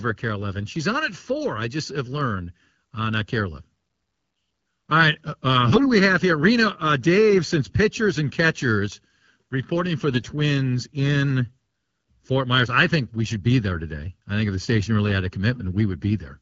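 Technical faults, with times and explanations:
Throughout, channel delay (comb filtering): one channel runs under a millisecond behind the other before the mono sum, so shared content cancels at evenly spaced frequencies starting around 700 Hz, leaving the speech hollow and phasey with fixed spectral notches.
5.68 to 5.90 s and 10.10 to 10.26 s, AMR bit errors: the first burst falls between "right uh uh" and "we have here", the second just after "and catchers reporting for". A few percent of the less protected bits arrived flipped while the checksum still passed, so excitation pulses landed in the wrong places and the fine pitch, gain and spectral values went off. Pitch and level roughly hold, but the voice turns hoarse and gargly there, on top of the light coding character of wideband AMR at a rate that fits 12.65 kbit/s.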